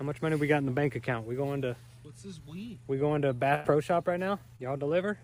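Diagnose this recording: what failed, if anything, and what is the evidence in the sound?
The network stage failed, with a burst of packet loss from 3.55 to 3.66 s. For about 95 ms the receiver has nothing real to play, so it extends the last received sound and fades it down, which gives a held, decaying tail in place of new material. When real audio resumes, roughly 100 ms of the original has been skipped, so the sound jumps forward with a section missing.

The network stage also shows a short concealed packet loss between 4.56 and 4.61 s. About 26 ms of substitute audio is generated from the preceding signal and then crossfaded back into the real stream, and roughly 20 ms of original material never arrives. It is heard as a brief smear or wobble rather than a clean gap.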